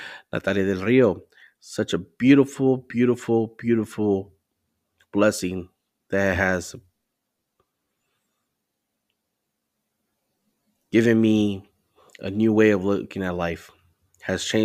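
No technical faults can be heard anywhere in the speech recording. There are no events to place in time order.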